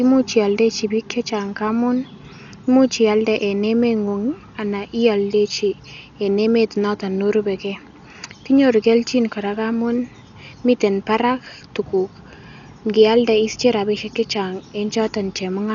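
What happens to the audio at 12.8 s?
At 12.8 s you're hearing the same thing that runs through the whole clip: heavy low-bitrate coding damage, most likely Dolby Digital compression. The band stops dead at about 7 kHz, so the speech sounds dull, and there's a rough, fluttering noise hanging around the tonal parts. The encoder was starved of bits, which fits something like 48 kbps, so it dropped the top end and left many frequency lines without real detail. The decoder then filled those gaps with dither noise, which is the grainy fizz you hear.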